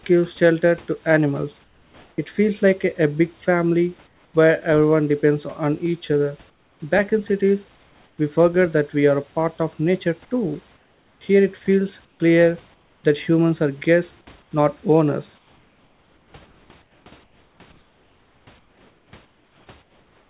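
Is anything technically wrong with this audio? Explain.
Yes. The speech pauses have comfort noise in place of the background at 1.64–2.18 s, 4.07–4.34 s, 6.5–6.8 s, 7.76–8.18 s, 10.76–11.21 s, 12.05–13.04 s, 14.42–14.51 s, and from 15.38 s to the end. In these gaps the room background gives way to a flat, featureless hiss, about 3 to 12 dB quieter where it can be measured. This likely comes from discontinuous transmission: the sender stops sending during silence, and the receiver substitutes synthetic noise. The audio has nothing above 4 kHz, which fits a narrowband G.711 call path.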